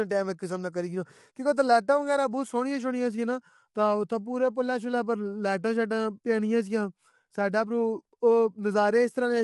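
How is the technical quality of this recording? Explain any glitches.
The recording has one fault, present throughout: low-delay AAC compression. The likely cause is an AAC-ELD encoder, as used for video calls, running at a low bitrate, and the level of damage fits roughly 32 kbps. Its short frames resolve the voice's harmonics poorly, so the codec fills the gaps between them with noise and lowers the top band. The speech sounds plainly rough and grainy, and nothing is present above about 11.6 kHz.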